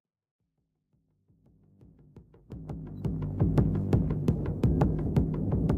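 No technical faults can be heard in this clip. The level rises in a smooth fade from the very beginning, reaching full level at about 3.46 s, with no click or hard edge at the start.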